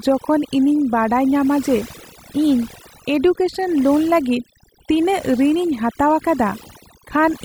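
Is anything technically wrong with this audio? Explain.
Yes. Throughout the speech, the pauses drop to near silence dotted with twinkling specks. This is overdone noise removal: a noise reducer set too hard pulls down any frequency band near its noise estimate, taking quieter parts of the voice with it.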